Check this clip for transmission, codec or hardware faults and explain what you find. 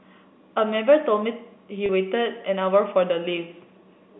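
One transmission fault turns up in this speech, carried over G.711 telephone coding whose band stops near 3.6 kHz.

From 1.86 to 1.89 s, packet loss with pitch repetition: about 30 ms went missing, which fits a single lost packet, and the receiver bridged it by repeating the last pitch period. It sounds like a brief buzzy hold. On the waveform, identical periodic cycles repeat; on the spectrogram, flat, unchanging harmonics.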